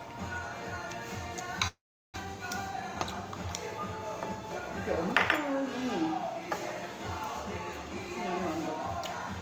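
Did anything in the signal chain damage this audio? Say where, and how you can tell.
Yes. From 1.67 to 2.26 s there is a long network dropout, likely from lost packets: the last sound is stretched into a fading buzz or hiss, then goes silent, and the audio resumes with about 400 ms missing. That decaying concealment tail sets it apart from a clean mute or edit.

From 2.75 to 3.14 s a jitter buffer speed-up in the receiver plays the sound at about 113% speed, removing around 70 ms in short pitch-period slices so it sounds hurried. Because the pitch stays unchanged, this is not a resampling or clock error.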